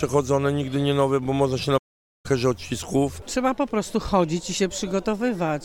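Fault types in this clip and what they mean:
Playback stall: at 1.77 s the sound cuts out in mid-flow and the output stays silent for about 464 ms, resuming at 2.26 s. The gap is clean silence rather than a fade or glitch, and the audio picks up again after the pause. The likely cause is that the player ran short of data or its playback thread was briefly blocked, so nothing reached the output until it recovered.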